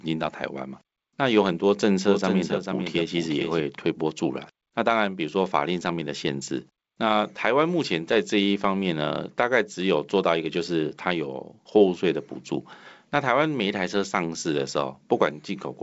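From 2.06 to 3.60 s a doubled audio track is heard: a full-band copy of the speech, about 5 dB quieter, trails roughly 400 ms behind, likely from a misaligned edit or slower second capture. A spectrogram shows each pattern repeated, shifted right, with abrupt edges.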